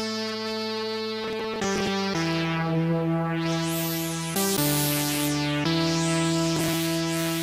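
Processor overload crackle appears from 1.24 to 1.87 s and again from 6.56 to 6.74 s. Repeated missed buffer deadlines drop slices of roughly 10 ms each, heard as gritty, tearing crackle.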